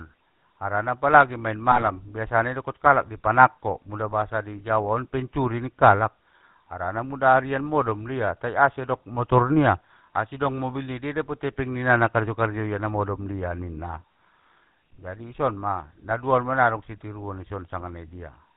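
Speech, squeezed through the GSM full-rate codec the whole way: nothing above 4 kHz, and that buzzy, gravelly roughness comes from the coder rebuilding the voice from a vocal-tract filter fed by sparse, regularly spaced pulses. The damage is plainly audible, and the sound fits the old 13 kbps full-rate channel. On top of that there are GSM bit errors at 1.72 to 1.92 s, 16.09 to 16.13 s and 17.81 to 17.84 s. Corrupted filter, pitch or gain values reach the decoder, so the voice briefly squawks, pops and gargles.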